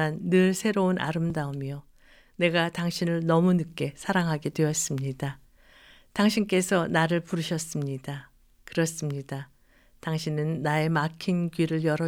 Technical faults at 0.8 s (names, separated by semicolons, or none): none